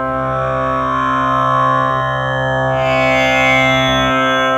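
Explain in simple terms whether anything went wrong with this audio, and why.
Nothing in this recording stood out as a problem when listening to it.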